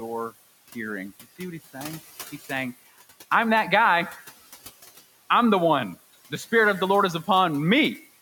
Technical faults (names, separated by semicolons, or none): noise suppressor artifacts